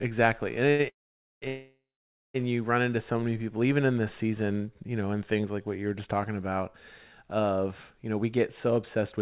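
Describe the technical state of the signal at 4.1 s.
At 4.1 s the signal is intact, with the speech carried cleanly through the call path and band-limited to nothing above 4 kHz, as its G.711 coding implies.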